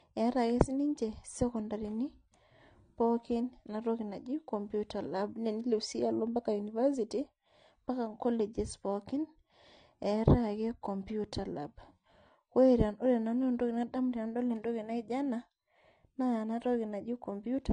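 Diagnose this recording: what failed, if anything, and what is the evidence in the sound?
The codec stage failed: the speech was likely transcoded between lossy codecs, a low-rate AAC encode followed by an MP3 encode. Throughout, nothing is heard above 9.7 kHz, the lowest cut-off in the chain, which stays, and the MP3 stacks its own artefacts on the AAC's.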